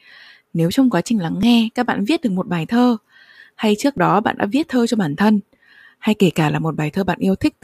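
In this speech clip there are two brief jumps where the sound skips abruptly forward with no gap of silence, at 1.43 s, between "trong quá trình lắng" and "các bạn viết được", and at 3.98 s, between "bài thơ hay trước" and "đó bạn đã viết". Each skip removes only a few milliseconds. The likely cause is a dropped buffer (overrun): the recording software fell behind, a block of samples was overwritten before it could be read, and the audio on either side was spliced together directly.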